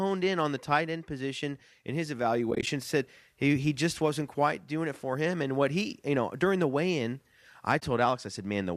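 From 2.51 to 2.67 s the speech breaks up with AAC frame loss and muting: about 80 ms of audio drops out in short gaps of roughly 20 ms or less, spread across 160 ms. A second hole of about 20 ms follows at 7.80 to 7.82 s. The decoder zeroed the missing frames' spectrum, so overlapping windows fade each gap in and out. A spectrogram shows narrow, full-height blank columns with soft edges, and the waveform shows tapered dips to silence. The short gaps fit the roughly 10 ms frames of the light, likely AAC-ELD coding.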